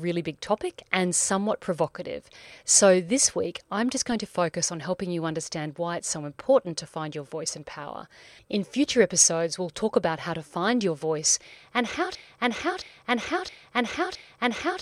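At 4.12 s there's a DC step, a sudden jump in the waveform's zero line, heard as a low thump under the speech before a 20 Hz high-pass bleeds it away. From 12.15 s to the end it turns into a broken-record loop, the same 0.67 s fragment repeating four times, likely a stalled player or stream resending its last buffer.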